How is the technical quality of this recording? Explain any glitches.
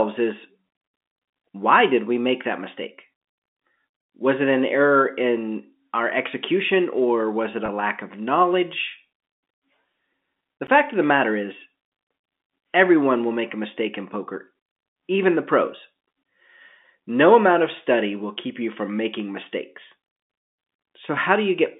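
The recording has three short dropouts of two kinds, heard through a telephone-band channel that passes roughly 200 Hz to 3.6 kHz.

Block of digital silence: At 3.33 to 3.38 s, right after "we make that mistake", the audio drops to silence for about 46 ms, which fits a 2048-sample output buffer that was not filled in time. A second, shorter hole at 10.67 s, about 12 ms and consistent with a 512-sample buffer, comes just before "fact of the matter". The signal cuts off and returns without any fade. The longer gap sounds like a brief hole and the shorter one like a tick.

Packet loss with pitch repetition: At 7.66 to 7.68 s, between "execution or was it" and "lack of", about 20 ms of audio is missing, which points to a single lost packet. The receiver covered the gap by repeating the last pitch period of the speech. At this short length the concealment is heard as a momentarily held, slightly buzzy sustain rather than silence, and normal audio resumes immediately afterwards.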